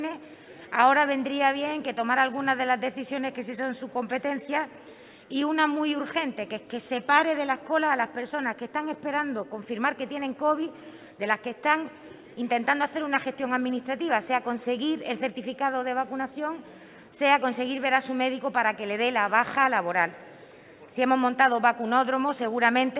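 Nothing stood out on listening; the audio carries the narrow 4 kHz ceiling of a telephone-band call path, and no fault can be heard.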